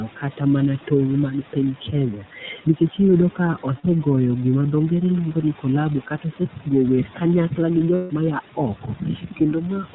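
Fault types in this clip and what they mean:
Noise suppressor artifacts: The suppressor pulls down whatever bands it judges to be steady noise, frame by frame, so the room noise dips by about 12 dB in the pauses and creeps back up under the speech.
iLBC codec: This is a narrowband VoIP codec coding each 30 ms frame on its own. You hear the hard ceiling at 4 kHz and a plainly rough, somewhat synthetic texture throughout, which fits its 13.33 kbps mode.
Speech cut by the noise suppressor: Here the suppressor mistook bits of speech for background and turned them down along with it, by up to about 13 dB. Consonants and word endings sound swallowed, worst in the last stretch from 8.53 s to the end.
Lost iLBC frames: Packets went missing and the decoder filled in by repeating the last pitch cycle with added noise. That gives a brief held, buzzy vowel for about 60 ms near 3.8 s and about 150 ms near 7.95 s, recovering almost immediately afterwards.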